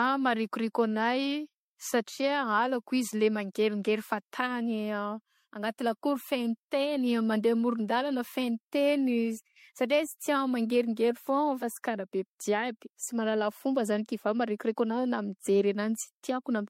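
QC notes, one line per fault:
Throughout, generation loss: the speech is swirly, smeared and hollow, with blurred attacks and nothing above 16.5 kHz, worse than one encode would leave. This is likely repeated MP3 re-encoding, roughly five passes, consistent with a 64 kbit/s chain.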